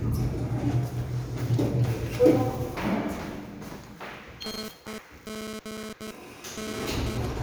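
From 4.46 s to 7.25 s, a nearby 2G handset transmitting in bursts about 217 times per second is having its radio pulses rectified by the audio circuitry, producing GSM phone buzz. The result is a hard, raspy 217 Hz buzz rich in harmonics, sitting about 7 dB below the wanted sound and bearing no relation to it. Because the phone is moving data rather than holding a call, the buzz stutters on and off instead of running steadily.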